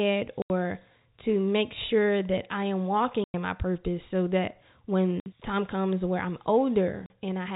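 Packet loss filled with silence cuts the speech at 0.42, 3.24, 5.2 and 7.06 s. Each time, packets failed to arrive and the receiver played dead silence in their place. The gaps last 80, 100, 60 and 40 ms, all multiples of 20 ms, which fits 20 ms packets. The sound stops abruptly and restarts just as sharply, across the narrow telephone band of the G.711 line.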